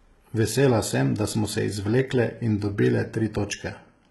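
Right through the speech there's heavy HE-AAC compression, likely: rebuilt treble sounds gritty and lispy on s sounds, nothing above 11.8 kHz, pointing to a very low bitrate.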